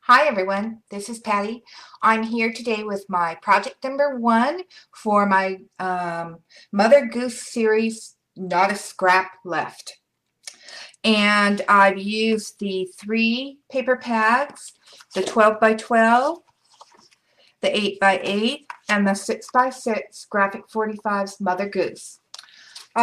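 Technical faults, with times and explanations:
No technical faults detected; the signal path shows nothing to flag at any point in the recording.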